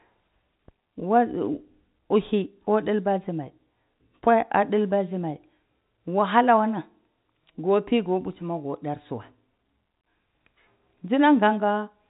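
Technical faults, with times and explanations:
No technical faults are audible anywhere in this clip.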